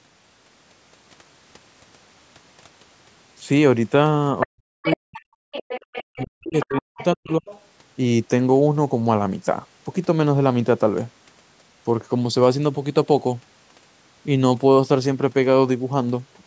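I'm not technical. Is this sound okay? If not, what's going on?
No. Other side's voice leaking through: a second voice can be heard underneath at 4.40–4.46, 4.84–5.2, 5.52–6.25, 6.59–7.05 and 7.46–7.65 seconds. It is fairly loud at first and grows fainter. The likely cause is a loudspeaker playing the other person, with the echo remover failing to scrub it from the microphone.

Speech suppressed in double talk: from 4.45 to 5.4 seconds and again from 6.04 to 7.46 seconds, the main voice drops sharply, at times nearly to silence, while that second voice is present. This likely happened because both people talked at once and the echo remover turned everything down.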